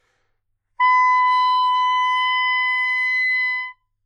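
The two channels run on separate clocks about 150 ppm apart, so channels drifting apart slide the delay towards about 0.7 ms, sweeping comb notches into slow flanging throughout.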